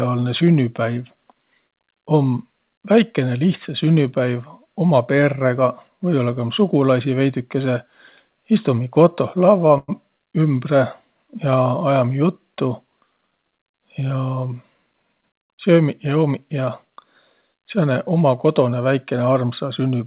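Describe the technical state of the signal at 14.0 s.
At 14.0 s the jitter buffer is in a speed-up, running from 13.22 to 14.14 s. It had built up more audio than its target, so the receiver repeatedly cut out short stretches one or a few pitch periods long, trimming about a tenth of a second in total. The speech runs about 10% fast with its pitch unchanged and sounds briefly hurried, all within the 4 kHz band limit of the call path, which fits G.711 mu-law.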